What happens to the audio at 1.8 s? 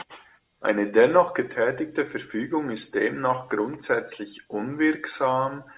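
Nothing goes wrong at 1.8 s; the speech carries on intact through that moment.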